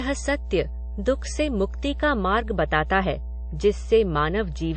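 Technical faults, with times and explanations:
Throughout, mains hum: a steady 60 Hz drone sits under the speech, fairly loud at roughly 10 dB below it, the sort of thing a ground loop couples in.
Throughout, transcoding between lossy codecs: nothing comes through above 8.3 kHz, and the artefacts of the different codecs are stacked on top of each other, likely a low-rate MP3 re-encoded as WMA.
1.88 to 4.77 s, de-emphasis applied wrongly: the treble slopes away smoothly, about 10 dB down at 10 kHz relative to 1 kHz, so everything turns dull and muffled.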